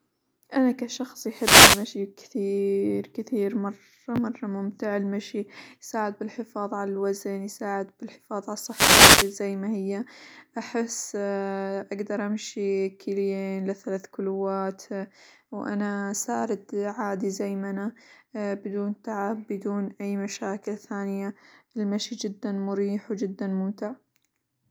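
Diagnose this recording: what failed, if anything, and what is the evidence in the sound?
The wireless mic link dropped out twice, so the failure sits in the analogue radio path ahead of the converter. Right after "أنا كشخص" there's a wireless microphone noise hit from 1.27 to 1.94 s, and another after "الوزن يساعد بالحفاظ على", from 8.66 to 9.36 s. Each is roughly 0.7 s of static-like swish laid over the speech. That's the FM carrier fading as reflections cancel, letting receiver noise surge up before the signal recovers.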